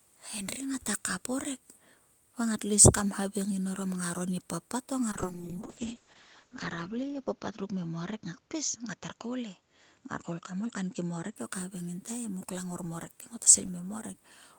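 From 5.14 s to 11.41 s a call bitrate drop degrades the speech. The encoder codes far more coarsely and the bandwidth narrows from 20 kHz to 8 kHz, sounding muffled and watery. It is worst for about 1.33 s, consistent with a fall from 32 kbps to around 7 kbps.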